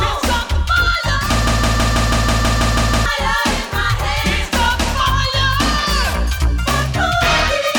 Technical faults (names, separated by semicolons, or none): broken-record loop